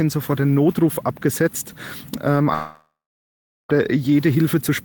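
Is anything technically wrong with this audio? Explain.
Yes. From 2.53 to 3.71 s, a long network dropout, likely lost packets, lets the receiver smear the last sound into a fading buzz, then 0.76 s of silence before the audio resumes with that section gone.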